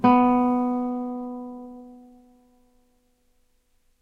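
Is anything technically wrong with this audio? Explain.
No, nothing is technically wrong with this audio. What is heard is the sound itself, with nothing added to it or taken from it by the recording or playback chain.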